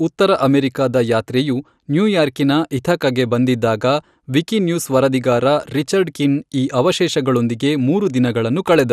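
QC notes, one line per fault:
Throughout, MP2 compression: dull speech with gurgling, granular distortion as upper sub-bands flicker out, likely from Layer II coding, which fits about 80 kbps.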